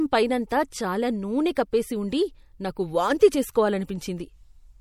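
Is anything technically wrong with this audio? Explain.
Yes, two things. Throughout the speech there's clearly audible codec damage: a watery, swirly texture and smeared consonant attacks. It's likely MP3 compression at around 64 kbps, where bits run short and weak frequency lines flicker on and off between frames. The treble still reaches about 20 kHz.

There's also a pre-echo at about 1.55 s, between "పైనంతా చాలా నూనె" and "కప్పేసి ఉండి నాకు వాంతి". A sharp attack landed late in a transform block, so the quantisation noise smeared backwards about 17 ms, producing a short hiss just before the onset and softening it.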